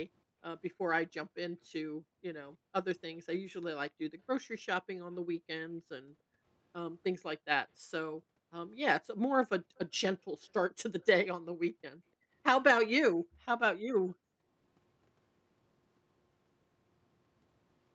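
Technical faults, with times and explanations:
0.24–0.41, 1.96–4.11, 5.34–6.45, 7.79–8.51, 9.62–10.42 and 11.72–14.47 s: background gated by the echo canceller. The room tone keeps ducking out, by up to about 40 dB, for brief stretches inside each window, because the canceller clamps the mic hard whenever the far-end loudspeaker plays.
11.01–11.05 s: echo leak. There's a faint, very short scrap of delayed speech, about 40 dB below the talker, trailing roughly 296 ms behind. It's likely loudspeaker pickup that the far side's echo canceller didn't fully strip before sending it back.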